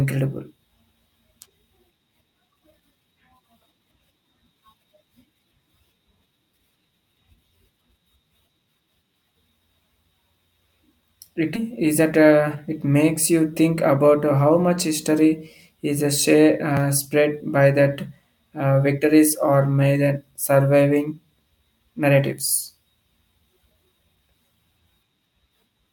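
At 11.55 s a skip ahead drops about 0.4 s of speech. Playback jumps straight into "is that" with no gap, seen as an abrupt waveform seam where the spectrogram's formant tracks break and restart mid-pattern. Two jitter buffer speed-ups follow as the receiver trims its excess delay by cutting out pitch-period slices. From 12.17 to 12.56 s, after "is that", the speech runs at 112% speed. From 13.56 to 14.04 s, before "how much history is", it runs at 109%. Both sound hurried at unchanged pitch, with harmonics staying level on the spectrogram while syllables visibly compress in time.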